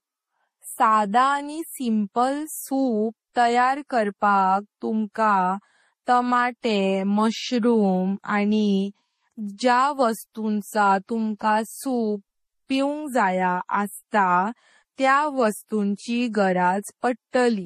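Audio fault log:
throughout — transcoding between lossy codecs. The speech carries two layers of coding damage at once. Nothing is heard above 15.2 kHz. That ceiling is the lowest cut-off in the chain, and it stays. The sound points to a low-rate MP3 encode, which fits about 40 kbit/s, likely followed by a Vorbis encode at a similar rate. The second codec spends bits on the first one's artefacts. It then adds its own, so both sets are heard together.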